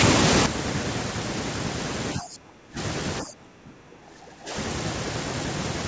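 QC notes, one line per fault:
0.46 s, sudden gain jump: sound and background noise drop together by about 11 dB and stay there to the end, likely a gain setting applied without a ramp.
2.18 to 2.78 s and 3.23 to 4.55 s, speech suppressed in double talk: speech dips by around 20 dB in pieces, likely an echo canceller turning down the talker along with the loudspeaker echo during overlap.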